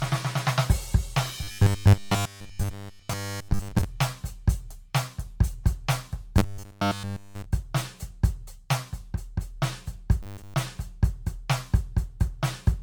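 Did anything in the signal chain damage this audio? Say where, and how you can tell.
Yes. Generation loss in the codec stage: the music sounds swirly, hollow and smeared throughout, with blurred attacks. That is worse than one 128 kbit/s MP3 pass, so it was likely re-encoded about ten times.

Robotic sound from repeated short buffers at the driver or buffer stage, at 1.43 to 3.84 s, 6.38 to 7.45 s and 10.23 to 10.54 s. A fixed 100 Hz buzz, unlike a click or a silent dropout, fits 10 ms chunks being replayed while new audio likely arrived late.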